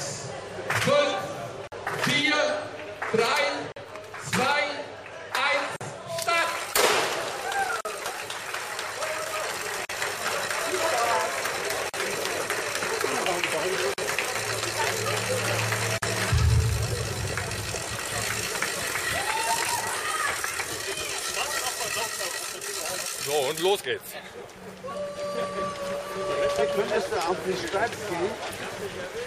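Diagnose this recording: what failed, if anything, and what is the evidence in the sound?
At the codec stage, the audio was encoded as separate roughly 2-second pieces and joined without trimming encoder delay and padding. Each join leaves a gap at a join of encoded pieces, a silence of about 43 to 46 ms with smeared edges, at 1.67, 3.72, 5.76, 7.81, 9.85, 11.89, 13.94 and 15.98 s.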